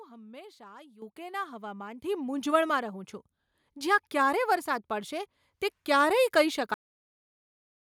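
At 1.02 s the microphone volume is stepped up by about 10 dB, and at 2.04 s it rises again by about 7 dB. Both changes are abrupt gain steps applied to the capture device rather than to the speech alone, so the voice and the background noise floor jump up in level together at each point. This is what happens when call software judges the input too quiet and raises the device's input volume in a single increment instead of ramping it.

At 6.74 s the clip has a cut-off end. The speech stops in the middle of a sound, with no natural decay, and drops straight to digital silence, which lasts until the end of the clip. The final buffers of audio were never written or played out, so the waveform is simply truncated at that instant rather than fading or ending at a pause.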